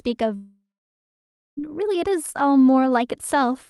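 A speech clip in which the sound breaks off at 0.35 s: the last moment is stretched into a fading buzz that lasts only a few tenths of a second, then about 0.93 s of near silence follows, and the speech resumes at 1.59 s with roughly 1.2 s of it simply gone. This is likely a long network dropout on a call link carried by a codec band-limited to around 12 kHz, which fits Opus at about 32 kbps.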